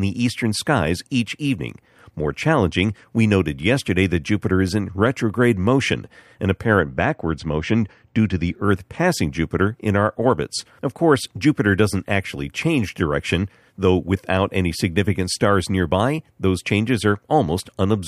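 6.80 to 8.64 s: channel delay (comb filtering). A lag of about two samples notches the mono sum near 10 kHz, dulling the speech. A spectrogram shows a dark band there.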